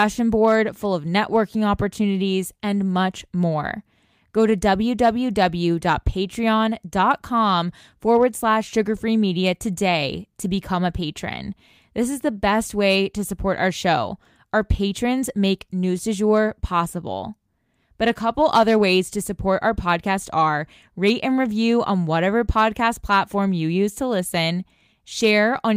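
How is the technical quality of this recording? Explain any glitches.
No glitches or technical faults heard.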